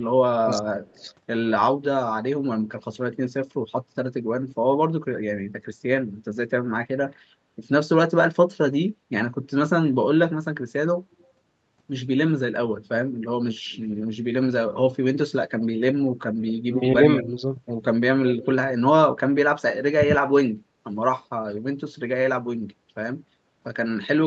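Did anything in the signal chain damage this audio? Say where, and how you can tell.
Yes, the call processing's echo canceller did the damage. Speech suppressed in double talk shows up at 0.46–1.04 s, 16.67–17.41 s and 19.97–20.52 s. The first and last dips go deep, roughly 35–40 dB, and the middle one is only a slight sag. It's likely the canceller ducking both sides while they overlapped.

Same stage, opposite failure: echo leak. A delayed copy of the speech trails by about 176–185 ms at 0.54–1.12 s, 11.2–11.26 s, 17.17–17.27 s and 18.27–18.47 s. It sits roughly 10–35 dB under the direct speech, likely loudspeaker pickup the loudspeaker side's canceller didn't fully subtract.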